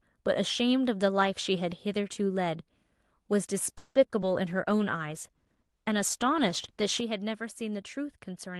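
A call audio freeze at 3.77 to 3.97 s interrupts this speech recording: the sound stretches into a fading buzz for about 180 ms before the speech resumes from where it stopped. This likely happened because packets were held up and the jitter buffer ran dry, so the receiver filled the gap, leaving the rest of the call about 180 ms later than before while nothing is skipped. At 4.21 to 4.24 s a short concealed packet loss produces a brief smear, as roughly 20 ms of audio never arrived and the decoder papered over the hole by extending the preceding sound before blending back into the real signal. A call bitrate drop runs from 4.45 to 6.89 s, where the speech turns rough and coarsely coded, which fits the encoder falling from about 32 to 15 kbps and staying at that lowest rate for about 2.4 s before recovering. At 7.00 s a sudden gain jump drops the speech and background together by about 6 dB through to the end, with no ramp between the two levels, likely a digital gain setting changed abruptly.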